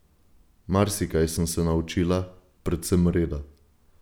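No technical faults can be heard anywhere in this speech recording. At no point does the sound itself go wrong.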